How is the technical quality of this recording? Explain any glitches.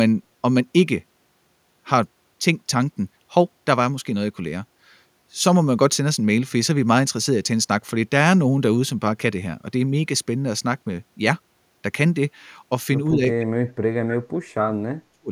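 One glitch, at the end. From 13.38 s to 15.31 s, speech is suppressed in double talk: the speech is turned down, by as much as roughly 40 dB over about a second and a half in total. Both sides likely talked at once, so the echo canceller attenuated both the talker and the loudspeaker echo.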